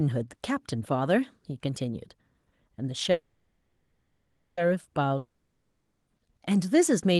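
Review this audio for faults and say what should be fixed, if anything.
Call audio freeze, 3.11 to 4.59 s: the sound stalls and the last fragment is stretched into a buzzy tail that fades, ending in about 0.52 s of silence. The likely cause is packets held up in transit, so the jitter buffer ran dry and the receiver filled about 1.46 s. When the audio resumes, it picks up exactly where it stopped, so nothing is lost, but everything afterwards plays about 1.46 s late.

Long network dropout, 5.17 to 6.09 s: again the last sound is carried on as a fading buzz, followed by about 0.61 s of silence. This time the audio returns further along, and the 0.9 s that should have played in the gap is missing. The likely cause is that no packets arrived for that stretch and they were never recovered. The surrounding audio shows the call codec's band limit near 12 kHz.

To prevent both faults, stabilise the network route and give the jitter buffer enough headroom, with loss recovery such as forward error correction, so that brief stalls and drops can be absorbed before they are heard.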